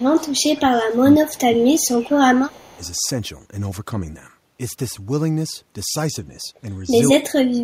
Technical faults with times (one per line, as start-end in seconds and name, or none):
0.00-1.51 speech suppressed in double talk
1.26-2.03 echo leak
1.95-2.78 speech suppressed in double talk
2.52-2.87 echo leak
7.14-7.63 speech suppressed in double talk